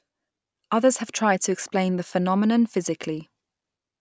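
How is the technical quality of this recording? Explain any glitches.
No technical faults are audible anywhere in this recording.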